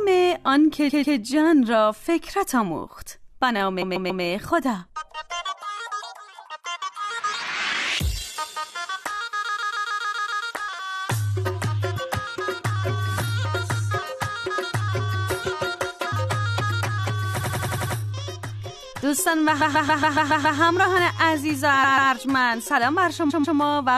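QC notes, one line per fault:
0.88–1.16, 3.81–4.23, 9.48–10.45, 17.39–17.95, 19.60–20.58, 21.83–22.11, 23.29–23.57 s, repeated frames: a block of about 139 ms (93 ms at 17.39 s) replays two to seven extra times. The content is duplicated rather than lost, so timing lengthens.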